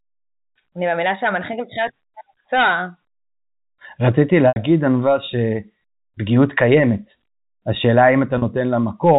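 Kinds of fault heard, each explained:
Packet loss with pitch repetition, at 4.48 s and 8.38 s: both times the audio drops out and the receiver fills the gap by looping the last pitch period it received. The 80 ms gap at 4.48 s carries a held, buzzy tone that fades toward silence before the speech cross-fades back in. The 40 ms gap at 8.38 s is heard only as a brief held buzz. Both gap lengths fit 20 ms packets.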